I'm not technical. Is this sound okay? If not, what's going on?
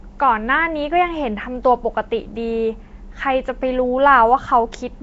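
No. The speech has a rough, hissy haze around it from start to finish, and it sounds smeared, a bit like it's underwater. That is Nellymoser compression, most likely from the old Flash microphone codec. It squeezes sound into small chunks with very little detail, fills quiet parts with noise, and drops everything above about 7.8 kHz. That's why it sounds dull and fizzy at once.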